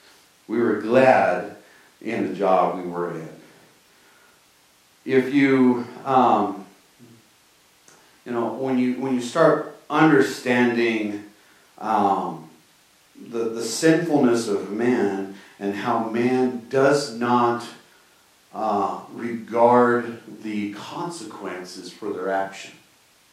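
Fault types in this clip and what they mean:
No technical faults are audible in this speech.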